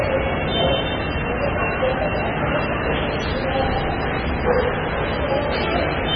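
An everyday sound recording with MP3 compression damage across the whole clip. Nothing survives above about 5.9 kHz, so the top end is cut off flat. The heavy damage points to a very low bitrate, around 16 kbps. At that rate the encoder likely ran short of bits. It dropped the treble and zeroed weaker frequency lines. Those lines flicker on and off between frames. The result is a watery, swirling texture, and sharp attacks smear.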